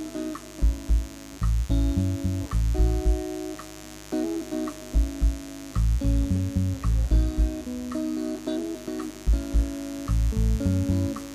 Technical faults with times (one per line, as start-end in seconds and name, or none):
0.00-11.34 mains buzz